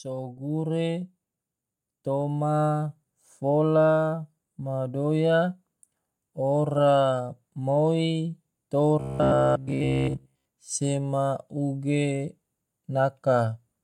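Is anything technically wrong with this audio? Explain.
Yes. Automatic gain rising, from 0.05 s to 2.68 s: the automatic gain control judged the incoming speech too quiet and steadily turned its gain up, by about 8 dB over those two and a half seconds. Because the gain acts on the whole signal, the voice and the background noise swell together, so the opening of the clip sounds as if the level is being slowly faded up rather than starting at a settled loudness.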